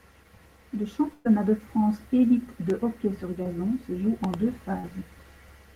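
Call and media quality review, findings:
Burst of packet loss, 1.13–1.27 s. Consecutive packets dropped or late at the receiver; jitter buffer/PLC extrapolated about 115 ms from the last good frame while fading it. About 120 ms of speech is missing outright. No hard silence: heard as a held, decaying buzz or hiss, then speech jumps ahead. Network path or jitter buffer underrun the probable component.

Loud pop, 2.70–2.72 s. Single sharp transient about 10 dB above the speech peak. Likely cause: a voltage step from a connector, switch or driver glitch upstream of capture. Speech continues underneath.
Loud pop, 4.24–4.36 s. Two pops in quick succession, about 10 dB above signal, same character. Likely a repeated capture-side glitch or static discharge.

Short concealed packet loss, 3.43–3.47 s. About 20 ms lost in transit; decoder PLC synthesised 20 ms from prior pitch or noise, then crossfaded back. 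Brief smear or wobble; a short consonant may drop.
Short concealed packet loss, 4.81–4.85 s. About 20 ms missing, 26 ms concealed. Same decoder fill-in mechanism, heard as a momentary wobble before real audio resumes.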